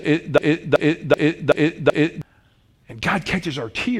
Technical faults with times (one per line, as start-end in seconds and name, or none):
0.00-2.22 broken-record loop